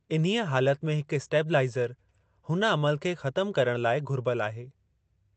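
Nothing's technically wrong with this bit of speech; it's just gone through an ordinary call path, and the top end rolling off at around 8 kHz is what you'd expect from a wideband Opus setting at a modest bitrate.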